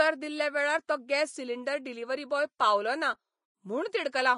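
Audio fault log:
throughout: Vorbis compression. Nothing sounds above 10.5 kHz, and the treble below is hissy and grainy, with roughened tones and smeared onsets. This likely comes from Vorbis at a low bitrate near 31 kbps, replacing fine detail with matching noise; a plain low-pass would sound dull, not grainy.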